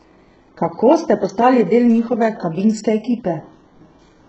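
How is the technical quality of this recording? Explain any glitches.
The speech is heavily degraded throughout. Nothing reaches above 8 kHz, and the s sounds come out gritty and metallic with a lisping edge. That fits HE-AAC compression, likely at a very low bitrate around 8 kbps, which codes only the lower band and fakes the treble by copying lower harmonics upward under a coarse envelope, so they never quite line up.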